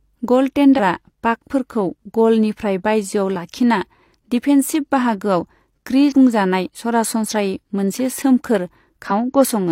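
At 0.75, 6.08 and 9.07 s, damaged data in a compressed stream makes the decoder lose sync: brief disruptions lasting about 50 ms.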